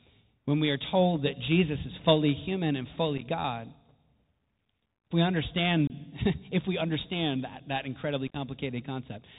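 From start to finish the speech carries the sound of a Bluetooth CVSD headset codec, consistent with a 64 kbps CVSD link. The codec encodes one bit per sample, stepping the waveform up or down with an adaptive step size. Content above 4 kHz is gone, leaving a narrowband, boxy tone. Loud high-frequency energy outruns the step size and distorts, sibilants turn scratchy, and a granular hiss sits under the speech.

Unconcealed Bluetooth headset packet loss occurs three times. Lost voice packets are replaced by silence or an idle pattern rather than patched over. At 3.18 s, 15 ms of audio, a few packets' worth, drops out in short holes spread over 37.5 ms, the longest 7.5 ms. At 5.87 s about 26 ms of audio, several packets, is lost, cutting the signal with hard edges. At 8.28 s the damage is heaviest: 48.8 ms, roughly a dozen or more packets, is lost across 75 ms in runs up to 15 ms, giving a brief chopped, crackly stretch. 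Each hole starts and ends abruptly, and because the CVSD step size has to rebuild, the speech returns quieter for an instant.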